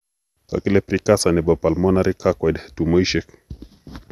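Speech runs with a swirly, hollow quality from start to finish, with consonant attacks smeared and a watery noise clinging to the voice, and nothing is heard above 12.5 kHz. This is generation loss: the recording was likely decoded and re-encoded around five times with a lossy codec whose character points to MP2 at 128 kbit/s. Each pass requantised the signal on a shifted frame grid, so the noise piled up.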